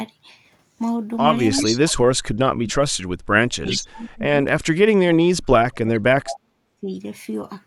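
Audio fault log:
1.57–1.64 s, 3.7–3.82 s, 5.94–5.99 s, 6.24–6.35 s echo leak: the far end's echo canceller likely failed to remove its loudspeaker pickup. Brief copies of the speech return about 394 ms late, at about 15, 10, 25 and 10 dB below the speech.
1.62–4.48 s, 4.98–6.06 s, 6.34–6.94 s speech suppressed in double talk: with both sides talking, the echo canceller likely mistook the local talker for echo and attenuated everything. The speech dips, dropping by roughly 40 dB at its deepest, across most of the middle of the clip.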